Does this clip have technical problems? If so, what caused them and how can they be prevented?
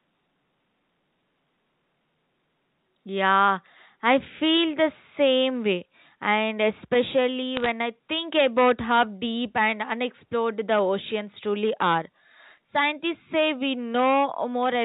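Yes. Bit errors on a digital phone line cause two bursts of crackle. The first runs from 7.55 to 7.70 s, just before "I think about how." The second, lighter one runs from 12.51 to 12.58 s, right after "the oceans truly are." Each flipped bit corrupts one sample of the 8-bit telephone signal. Hits on the top bits, or on the sign of a loud sample, throw that sample far off, giving sharp ticks. The first burst is denser, with an error rate of roughly a third of a percent. To prevent this, use a clean, error-checked digital link.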